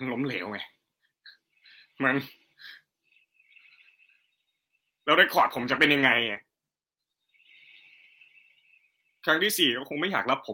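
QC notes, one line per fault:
4.59–4.67 s, short stall from a late packet: a late packet emptied the jitter buffer, so the last sound is held 60 ms, then resumes intact; the spectrogram shows flat, smeared harmonics.
4.79 s and 4.88 s, short concealed packet loss: 20 ms gaps were filled by extending the preceding sound, heard as brief smears; each appears as a short blurred patch in the waveform envelope.
5.39–6.48 s, call bitrate drop: the encoder rate fell from 32 to 13 kbps for about a second, turning speech coarse and muffled; the spectrogram's upper band thins out.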